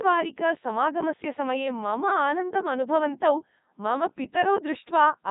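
From start to finish the speech has passed through a Codec 2 vocoder, and the thin, heavily damaged result fits its top rate of about 3.2 kbit/s. Rather than carrying the waveform, the codec sends only pitch, voicing, energy and a coarse spectral envelope, and the decoder rebuilds the voice from sine waves. The speech therefore comes out robotic and buzzy, with a synthetic, hollow timbre, and nothing is heard above 3.8 kHz.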